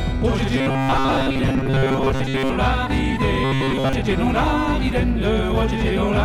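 From 0.56 to 2.55 s and again from 3.44 to 3.93 s, robotic sound from repeated short buffers imposes a rigid metallic buzz at 134 Hz, likely from a roughly 7.5 ms block replayed in place of most of the incoming audio. Unlike a mains hum, the buzz rises and falls with the sound rather than sitting underneath it.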